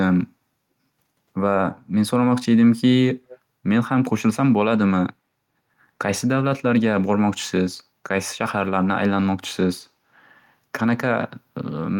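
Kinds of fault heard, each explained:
Echo leak: a far-end loudspeaker's echo canceller likely left part of its microphone pickup in the outgoing signal, returning the speech. From 3.28 to 3.38 s, a faint, brief copy trails 375 ms behind, roughly 25 dB below the speech.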